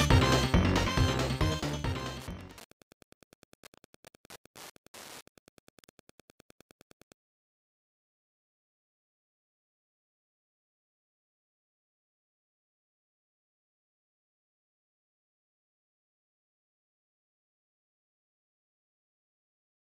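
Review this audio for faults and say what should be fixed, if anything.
Wi-Fi interference runs from 0.95 to 7.19 s: a tick every 102.4 ms, roughly 30 dB below the signal, as the circuit rectifies a nearby radio's beacons. Its ten-per-second pulse, rather than a continuous tone, sets it apart from mains hum. Keeping wireless devices away from the audio wiring prevents it.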